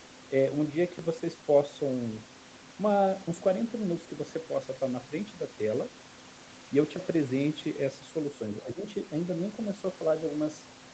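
A speech clip. Between 8.64 and 8.84 s the voice suddenly sinks by about 15 dB, with roughly 150 ms of it pushed down. This is likely speech suppressed in double talk. When both ends talk at once, the echo canceller cannot tell the near talker from loudspeaker echo. It turns everything down briefly. The top of the sound stops near 8 kHz, as expected for this call path.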